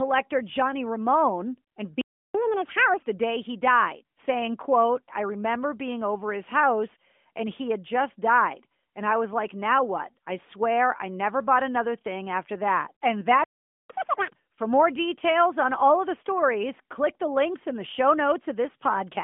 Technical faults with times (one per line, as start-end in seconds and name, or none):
2.01-2.35 playback stall
2.35-3.01 catch-up at higher speed
13.44-13.90 playback stall
13.90-14.35 catch-up at higher speed